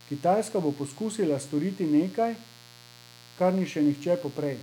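From start to finish the speech sits on a mains buzz based on 60 Hz, roughly 25 dB below the speech level. Sharp switching spikes from a dimmer, a rectifier or an unshielded run have been picked up on every half-cycle of the supply. That spiky waveform carries a dense ladder of 60 Hz harmonics stretching into the kilohertz range, so the interference reads as a constant, raspy buzz rather than a low hum.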